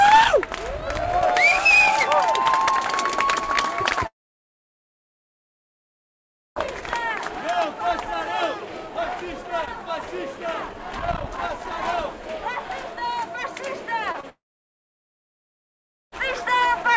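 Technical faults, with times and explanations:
4.07–6.59 s and 14.29–16.15 s, long network dropout: the audio stops arriving for about 2.5 s and then about 1.8 s. The receiver briefly continues the last sound as a fading buzz or hiss before silence takes over, and the missing stretch is simply lost when the audio resumes. The likely cause is a stall in the connection. On a spectrogram each gap appears as a short smeared tail followed by an empty block below the 8 kHz ceiling. The waveform shows a flat line there.
14.12–14.26 s, short concealed packet loss: two overlapping losses of about 30 ms each, right before the second dropout. The decoder patches each hole by extrapolating the preceding sound and then blending back, which produces a quick smear or wobble rather than a clean gap. On a spectrogram these show as narrow stretched or blurred strips where fine detail goes soft. The waveform shows a slightly repetitive, too-smooth segment of a few hundredths of a second.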